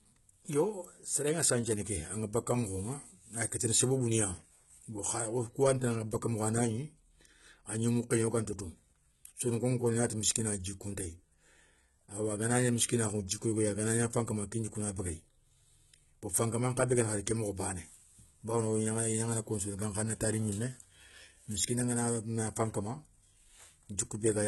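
From start to finish the speech carries heavy codec damage. The treble sounds synthetic, and sibilants come out gritty and lispy, with a metallic edge where the upper harmonics fail to line up with those below. This is likely HE-AAC compression at a rate that fits roughly 16 kbps: the lower spectrum is coded and the treble rebuilt by copying bands upward. A spectrogram shows repeated, smeared upper bands and nothing above 11.8 kHz.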